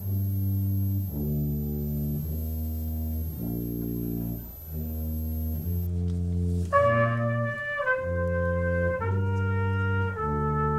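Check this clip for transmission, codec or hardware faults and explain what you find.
Switching supply whistle, 0.0 to 5.87 s: a power supply switching in an audible burst mode leaks a high whistle drifting between 12.0 and 12.9 kHz, roughly 20 dB under the sound.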